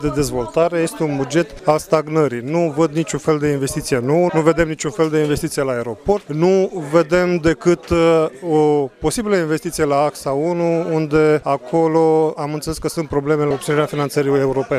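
Nothing here needs fixing: the audio runs along without any technical fault you'd pick up on a careful listen.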